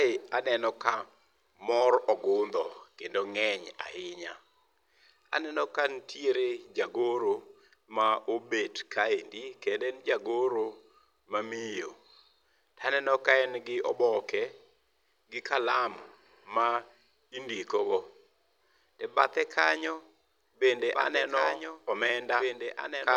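From 20.79 s to the end, the speech is doubled: a second full-band copy, roughly 5 dB quieter, trails about two seconds behind, likely from a slower capture path.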